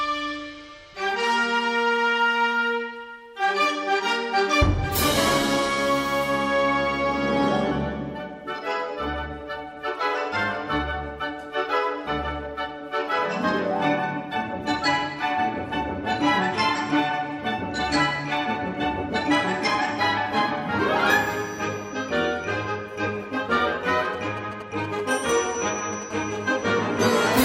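The audio is interrupted near its end by interference from a nearby 2G handset. From 23.90 to 26.04 s, GSM signalling bursts appear: irregular clusters of short buzzes pulsing at 217 Hz, giving a galloping dit-dit-dit rhythm, roughly 10 dB below the signal. This is the phone exchanging brief control traffic with the network. An unshielded or poorly filtered stage in the audio path demodulates the radio pulses as an envelope. From 26.1 to 27.4 s it becomes a steady GSM phone buzz: a hard, raspy 217 Hz tone, rich in harmonics and unrelated to the programme material, at about 18 dB below the signal. The continuous buzz is consistent with the handset having settled into an active call. Its transmitter keys on and off 217 times a second, and the circuitry rectifies those bursts into audible interference.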